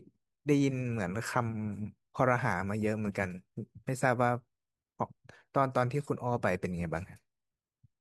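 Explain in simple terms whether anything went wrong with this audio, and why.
Nothing went wrong with this speech recording that a listener can pick out. At no point does the sound do anything it shouldn't.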